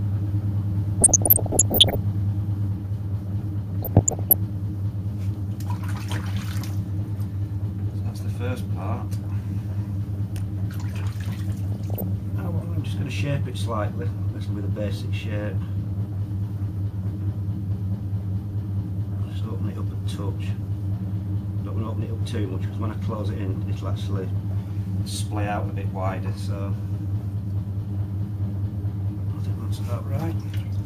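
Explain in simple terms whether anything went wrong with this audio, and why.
From the very start until 2.68 s, everything is heard twice: a slightly quieter copy trails the original by about a tenth of a second, then stops abruptly. This is a doubled audio track, likely from the same audio being picked up a second time through a slower route.

At 1.01 to 1.95 s, 3.83 to 4.34 s and 11.72 to 12.08 s, short blips of noise sit over the sound. This is DAB burbling: weak digital radio reception let errors slip through, briefly throwing parts of the audio out of balance.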